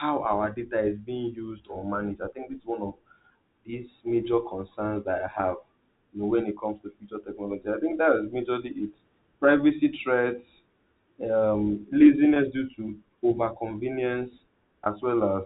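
Packet loss with pitch repetition hits at 5.38 s, just before "have you know when", then 12.34 to 12.36 s, before "due to overconvenience", and 14.84 to 14.86 s. Gaps of 10 ms and 20 ms were bridged by repeating the last pitch period. Each sounds like a brief buzzy hold.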